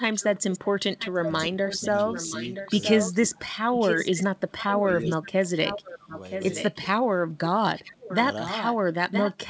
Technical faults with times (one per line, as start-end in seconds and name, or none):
0.13-6.75 echo leak
1.19-1.82 speech suppressed in double talk
3.12-3.68 speech suppressed in double talk
4.50-6.13 speech suppressed in double talk
6.87-7.95 speech suppressed in double talk
7.75-9.50 echo leak